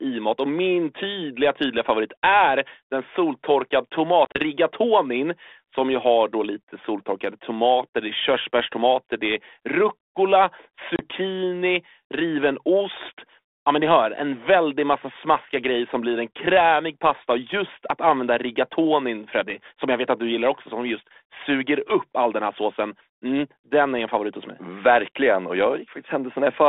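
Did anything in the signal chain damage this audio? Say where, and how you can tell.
Yes. Packet loss on an ADPCM call, a network-stage fault, hits at 4.25–4.43 s after "favorit är den soltorkade" and at 10.96–11.06 s after "körsbärstomater det är rucola". The first is about 70 ms of hard-edged silence scattered over 100 ms, in runs up to 30 ms. The second loses about 30 ms. Across the holes the 32 kbit/s G.726 decoder's adaptive predictor and step size lose step with the sender's, so speech resumes slightly distorted before resettling.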